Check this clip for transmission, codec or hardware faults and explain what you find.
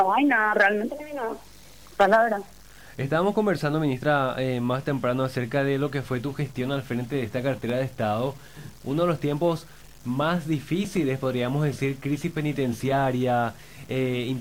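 One fault runs through the whole clip: low bit depth without dither. Grainy distortion tracks the sound about 30 dB below it, which fits likely truncation to 7 bits. The waveform shows coarse steps, and the spectrogram shows a broadband floor rising and falling with the signal.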